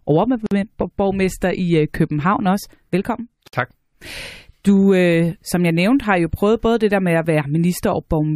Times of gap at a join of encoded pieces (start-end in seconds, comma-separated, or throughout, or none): 0.46-0.51, 3.48-3.53